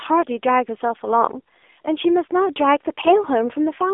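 Throughout, the speech has been carried through an AMR narrowband mobile codec, which rebuilds the signal from a coarse vocal-tract model excited by a handful of pulses per 5 ms. The degree of damage points to a low mode, around 7.4 kbps. Only a telephone band of about 300 Hz to 3.5 kHz remains, so the speech sounds thin and boxy, with a plainly audible buzzy, synthetic edge.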